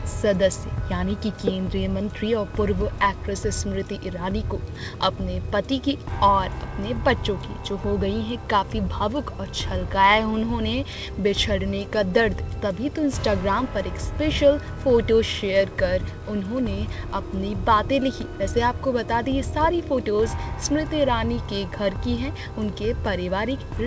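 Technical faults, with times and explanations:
No technical faults can be heard anywhere in this clip.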